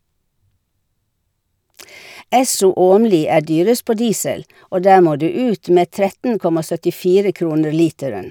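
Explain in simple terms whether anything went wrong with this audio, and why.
Nothing went wrong with this recording, as no technical faults can be heard anywhere in it. The speech comes through without any dropouts, glitches or interruptions.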